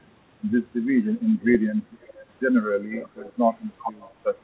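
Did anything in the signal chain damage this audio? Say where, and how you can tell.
Yes, in call processing: an echo leak at 2.01–2.27, 2.93–3.32 and 3.83–4.12 s. A copy trails the speech by 391 ms, growing from about 25 to about 10 dB below it. On a spectrogram, the same formant tracks repeat weaker and shifted right. The likely cause is a far-end echo canceller leaving loudspeaker pickup unremoved.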